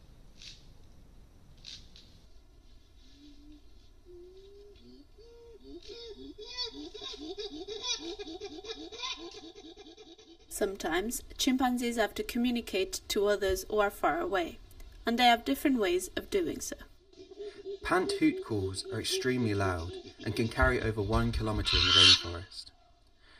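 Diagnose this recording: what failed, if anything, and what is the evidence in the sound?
A channel delay causing comb filtering, at the driver or buffer stage. From 2.26 s to the end the sound turns hollow and phasey, with fixed notches starting around 150 Hz. That fits one channel arriving about 3 ms late before a mono sum. Unlike a phaser, the notches never sweep.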